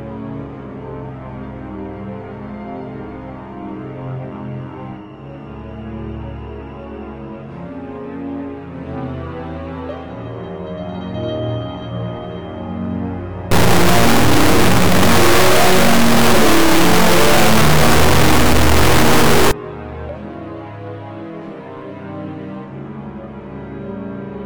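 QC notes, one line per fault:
13.51–19.51 s, stuck bit: harsh, buzzy distortion over the signal, with quiet stretches filled by loud noise, since the step is large, around -5 dBFS. The likely cause is a high data bit held fixed, shifting about half the sample values by that bit's weight.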